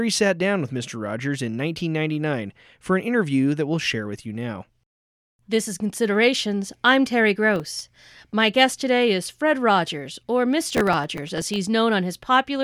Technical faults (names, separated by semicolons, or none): processor overload crackle